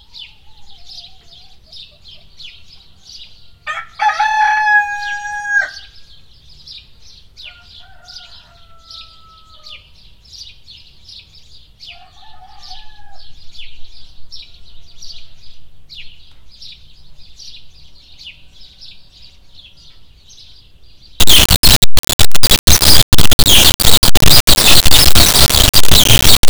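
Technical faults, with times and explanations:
21.2 to 26.5 s: integer read as float. Samples stored as 32-bit integers are read as 32-bit floats here. Most values become near zero or enormous. The output snaps between silence and the clipping limit. The result is a harsh, very loud buzzing square wave.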